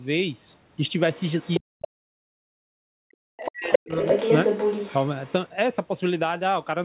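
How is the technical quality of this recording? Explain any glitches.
The recording has two linked echo-control faults, both concentrated between about 1.1 and 5.3 s. The audio is band-limited to 4 kHz, which fits a narrowband call codec such as G.711 and is not itself a fault.

Other side's voice leaking through: A second voice appears at 1.14–1.6 s (about 5 dB below the main talker), 3.45–3.51 s (about 10 dB below), 3.71–3.78 s (about 5 dB above), and 3.94–5.32 s (at roughly equal level). The likely cause is an echo canceller that failed to strip the loudspeaker playback out of the microphone signal. It differs from simple crosstalk because the scraps come and go in step with the canceller's behaviour. The last stretch is a sustained, competing voice.

Speech suppressed in double talk: From 1.59 to 2.86 s and from 3.08 to 3.97 s, the main talker dips, by up to about 40 dB, for roughly a second of affected time in each span. 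When both sides spoke at once, the canceller likely could not separate near speech from echo and turned everything down. That sets it apart from a dropout or packet loss, which would not track the other voice's activity.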